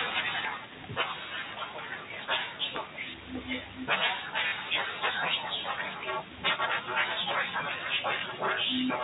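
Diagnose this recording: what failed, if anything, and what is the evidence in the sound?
At 0.45 s the speech and background drop about 4 dB in one step, likely the call processing's automatic gain lowering the microphone volume, a microphone volume step-down.

From 4.48 to 4.52 s there's a 40 ms robotic stutter, which fits two lost 20 ms packets. The network dropped them and the receiver repeated the last packet.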